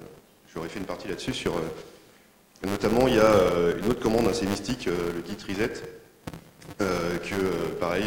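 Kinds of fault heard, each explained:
Filter restarted on every block: The filter loses its state at each block boundary, so every block starts with a small transient. This produces a 200 Hz buzz throughout, rising and falling with the signal's level.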